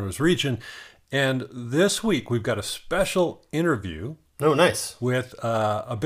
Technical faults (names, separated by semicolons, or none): none